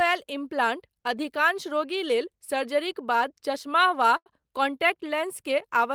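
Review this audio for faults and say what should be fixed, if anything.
A sound in the speech is held too long, with a faint buzz or dip, from 4.17 to 4.42 s, right after "सर्जरीक बाद चश्मा वा". This is a short stall from a late packet: the jitter buffer ran dry, so the receiver stretched the last sound for about 91 ms, then resumed exactly where it stopped, losing nothing. A slightly deeper or adaptive jitter buffer would absorb this delay without stalling.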